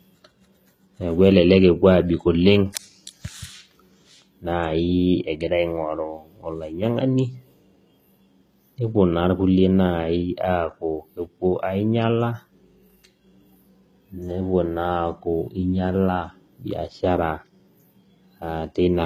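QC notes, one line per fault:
Throughout, HE-AAC compression: the treble stays bright but sounds gritty and metallic, s sounds come out lispy, and nothing reaches above 14.9 kHz. The likely cause is band replication rebuilding the top octaves from copied lower bands, which fits roughly 20 kbps.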